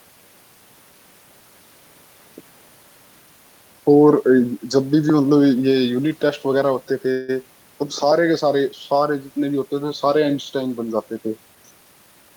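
At 7.11 s a call audio freeze begins and runs to 7.44 s. The last sound is extended for about 170 ms as a fading buzz or hiss, likely because packets were held up and the jitter buffer ran empty. The speech then resumes where it stopped, with nothing lost, only delayed.

From 11.55 s to 12.30 s comes a jitter buffer speed-up. The receiver trims short pitch-period pieces repeatedly, removing roughly 150 ms in total, so the speech plays at about 116% speed with unchanged pitch and sounds noticeably hurried.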